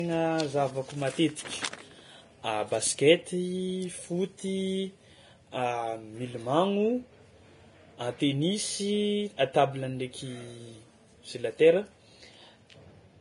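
Throughout the speech, the top end is cut lower. The treble turns hissy and grainy, and attacks blur. Likely heavy Vorbis compression, fitting roughly 29 kbps.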